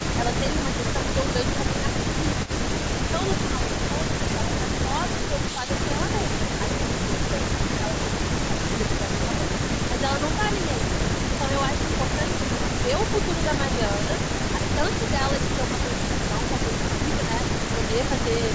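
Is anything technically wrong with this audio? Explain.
Yes, there are two problems. Speech suppressed in double talk, 0.4–0.99 s and 1.68–4.48 s: the speech dips by up to about 5 dB in short bits, likely an echo canceller ducking the talker while the far side also spoke. Echo leak, 2.45–2.5 s: a brief copy of the speech returns 158 ms late, about 20 dB down, likely loudspeaker pickup that the canceller didn't fully remove.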